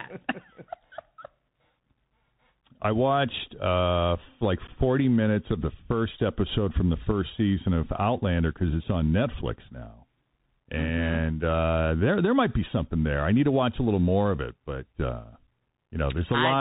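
Throughout, the speech carries Bluetooth CVSD headset codec damage: the one-bit 64 kHz delta modulator cuts everything above 4 kHz, scratches sibilants and lays a granular hiss beneath, unlike smoother wideband codec smearing. Unconcealed Bluetooth headset packet loss leaves an 11.2 ms hard-edged hole from 4.67 to 4.70 s, just before "minutes of the first", and a 7.5 ms hole from 9.42 to 9.45 s, right after "because it's on". Each fits a few lost packets, with abrupt edges rather than smoothed-over concealment.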